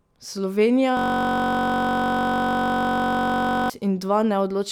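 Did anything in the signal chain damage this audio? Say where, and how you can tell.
Yes. From 0.97 s to 3.70 s the driver or buffer stage failed with a system hang loop. The speech freezes into a steady buzz at 46.9 Hz, made by one 21.33 ms slice replaying about 128 times, which fits a 1024-sample ring buffer recycled while the host stalled. The waveform shows identical repeating blocks with no amplitude change. The spectrogram shows an unchanging comb of horizontal harmonic lines spaced 46.9 Hz apart until normal audio resumes.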